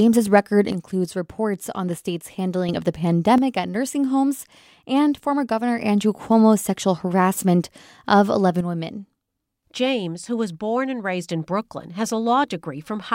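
At 0.72 s the speech level falls abruptly by about 6 dB and stays down until 2.69 s. It drops again from 3.38 s to 5.78 s, and once more from 8.61 s to the end of the clip. The likely cause is one channel dropping out. One stereo side goes silent. After the mono sum, the shared speech loses half its amplitude. Anything carried only in that channel vanishes. Each return to full level is just as sudden.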